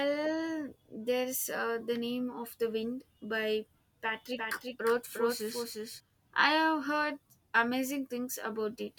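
From 4.38 to 6.00 s the speech picks up a doubled audio track: a second full-band copy trailing around 400 ms behind, roughly 5 dB quieter, with no room tail, cutting in and out abruptly. Likely a slower second capture path mixed in alongside the main one.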